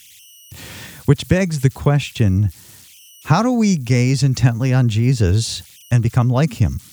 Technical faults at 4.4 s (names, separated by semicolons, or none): converter idle tones